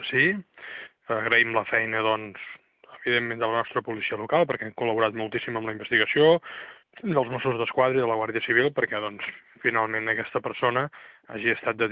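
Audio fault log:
Nothing stood out on listening.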